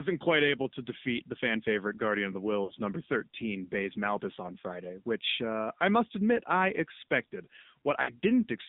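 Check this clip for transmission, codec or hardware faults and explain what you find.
Two faults are present: narrowband mobile coding across the whole clip, and two short dropouts from lost frames.

AMR narrowband mobile codec, throughout: The speech is confined to roughly 200 Hz to 3.7 kHz, and the plainly audible buzzy, synthetic texture points to a low AMR-NB mode, around 7.4 kbps. The codec rebuilds speech from a vocal tract model excited by a few pulses per subframe, so fine detail is lost. On a spectrogram, the energy ends at a hard ceiling near 3.7 kHz and is empty above it.

Lost AMR speech frames, 2.64 to 2.72 s and 8.02 to 8.12 s: Each gap fits about three 20 ms frames (60 ms) that failed their checks. The decoder repeats the last good pitch and vocal tract settings at falling gain, so the sound smears briefly, fades, and then returns weak or rough. On a waveform, the envelope sags for about 0.1 s. 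On a spectrogram, the harmonics flatten into a short, fading, frozen band.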